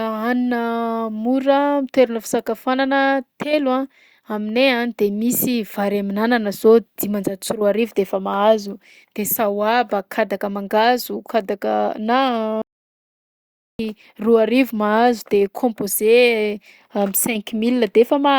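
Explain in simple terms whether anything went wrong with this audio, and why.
Something did go wrong: an audio dropout to silence. The input feeding the recorder was most likely cut off for a moment, perhaps by a loose connection, a failed link or an accidental mute, while the recording carried on writing pure silence. From 12.62 to 13.79 seconds, about 1.18 seconds, the speech stops dead, with no background hiss at all, and then jumps straight back in at "roa arivo mahazo de". Whatever was said in that gap is lost.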